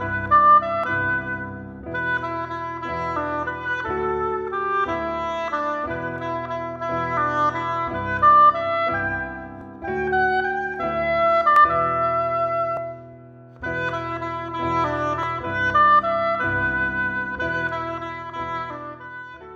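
At 0.84, 9.61, 11.56, 12.77 and 15.23 s the sound jumps ahead with no gap. Each is likely a dropped buffer (overrun): samples were overwritten before being read. About 150 ms goes missing each time, except about 50 ms at 9.61 s.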